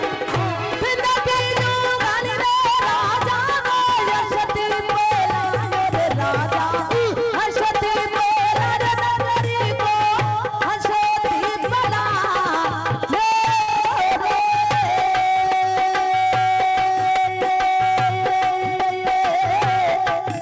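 At 13.62 to 13.69 s a burst of packet loss interrupts the audio. The receiver conceals the gap by extending and fading the last sound for about 54 ms, then resumes roughly 60 ms further on. The call path's band limit at 8 kHz fits G.722.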